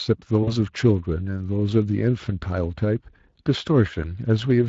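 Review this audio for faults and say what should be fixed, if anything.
The whole speech clip carries Speex codec damage you can plainly hear: a hoarse, noisy edge where the excitation is short of bits. That fits a mid-quality setting of around 20 kbps, so the upper band is likely just a shaped noise fill. Encoding at a higher quality setting, or using a modern codec like Opus, would clear this up.

At 0.43 s there's VoIP packet loss concealed by the speech codec. About 40 ms went missing, which fits two dropped 20 ms frames. The decoder stretched its last pitch and filter to cover the gap, and the sound stays weak and smeared until around 0.53 s while the decoder state recovers. A bigger jitter buffer, FEC or redundancy on the link would head this off.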